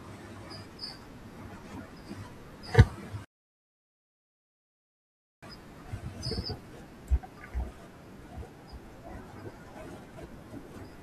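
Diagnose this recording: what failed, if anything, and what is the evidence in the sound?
A rebuffering stall at the playback stage runs from 3.25 to 5.43 s: the speech drops to silence, then resumes exactly where it stopped, adding about 2.18 s.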